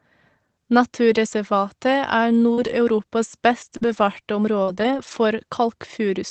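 At 2.53 s the speech smears for a moment, a short wobble lasting until 2.59 s. This is short concealed packet loss. About 40 ms of audio never reached the decoder in time, so the receiver spent 38 ms extending the preceding sound, pitched if voiced or as shaped noise if not, then blended back into the real signal.

Overlapping that, from 2.57 s to 2.71 s, the sound turns grainier and noisier without any gap. These are lost packets rebuilt from error correction. The pattern fits four separate packets that went missing. Each following packet carried a low-bitrate backup copy, which the Opus decoder played instead, giving 80 ms of rebuilt, rougher-textured audio in place of silence. With the call limited to around 8 kHz of bandwidth, the roughness shows as texture rather than a loss of treble.

Between 3.77 s and 5.17 s, a few small hiccups and ticks are scattered through otherwise clear speech. 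These are scattered short gaps: roughly three separate losses, the longest around 40 ms, adding up to 100 ms missing. The receiver patched each hole by continuing the last sound, concealing only a small share of the stretch, roughly 7 percent. Rebuilt frames, about 340 ms in total, add roughness across the span.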